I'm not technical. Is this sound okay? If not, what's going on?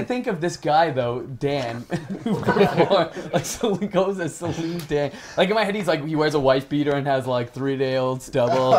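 No. At 6.92 to 6.94 seconds there is a single loud pop, a short, sharp crack that stands out well above the rest of the audio while the sound carries on underneath it. It is most likely caused by a sudden jolt of electricity getting into the signal, for example from a cable being plugged in, a switch being flicked, a spark of static, or a brief hiccup in the audio hardware.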